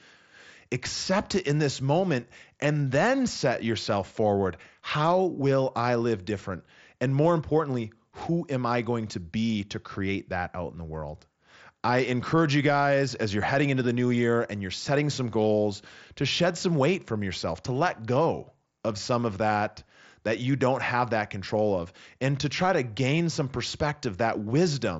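Nothing stood out on listening to this speech clip.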